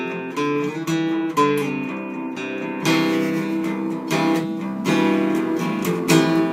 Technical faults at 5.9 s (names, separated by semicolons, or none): crude rate conversion